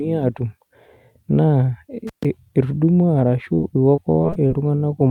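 This speech clip has three faults. An intermittent contact cuts the sound from 2.07 to 2.25 s. The line stays open for about 132 ms, with crackle at each edge. At 3.55 to 3.60 s, a short concealed packet loss leaves a brief smear. About 20 ms of audio never arrived and the decoder patched over it. From 3.96 to 4.52 s, repeated packet loss makes the sound choppy and robotic. The gaps come one after another, each up to 25 ms, and concealment fills about a sixth of that stretch.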